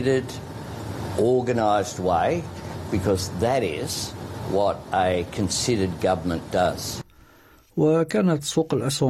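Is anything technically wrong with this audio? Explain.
No, nothing technically wrong can be heard here.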